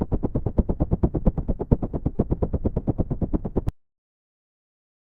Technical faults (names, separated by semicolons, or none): short stall from a late packet; cut-off end